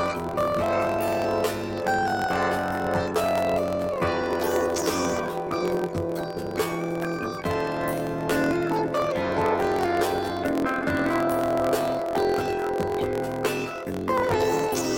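From start to end, the sound plays an octave high with a flutter at about 43.1 Hz. This is planar audio read as interleaved. The data comes in blocks of 23.22 ms, which fits 1024-sample blocks, each holding all left samples and then all right samples. The player reads them as alternating pairs. Each block therefore plays twice at double speed, left half then right half. The pitch rises 12 semitones while the overall pace holds. The block seams repeat 43 times a second and add the flutter.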